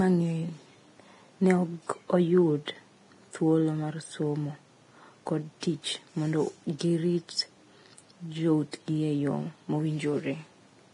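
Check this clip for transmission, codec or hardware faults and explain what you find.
One codec fault is present. Throughout the speech, heavy Vorbis compression is the likely cause. Nothing remains above 10.6 kHz. Coarsely quantised treble turns hissy and grainy, which fits a low bitrate near 30 kbps.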